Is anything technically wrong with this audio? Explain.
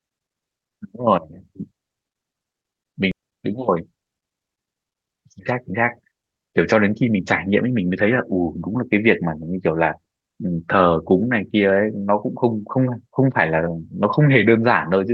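Yes, two timing faults follow one another early in the speech.

From 3.11 to 3.13 s there is a skip ahead. The speech lurches forward with no silence at the join, as though about a second of talk had been cut out and the two ends spliced directly together. That second of audio was discarded, either lost in transit or dropped by the jitter buffer while later audio was already queued. Playback simply resumed from the newer material.

From 3.22 to 7.66 s comes a jitter buffer speed-up. The talker sounds rushed, running at about 112% of normal speed while the pitch stays unchanged. The buffer was holding more audio than its target. To bring the delay back down, the receiver repeatedly cut out short slices one or a few pitch periods long, trimming roughly half a second in total across that stretch. This is why the speech is compressed in time rather than raised in pitch.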